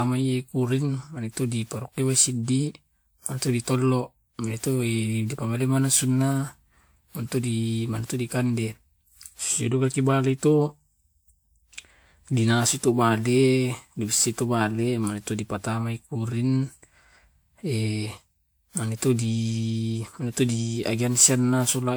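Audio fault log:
throughout: generation loss. The speech sounds swirly, hollow and smeared, with blurred consonant onsets. A spectrogram shows flickering holes and mottled noise up to 20.1 kHz, likely from around seven lossy passes, fitting a 128 kbit/s WMA-type codec, each re-quantising on a shifted frame grid.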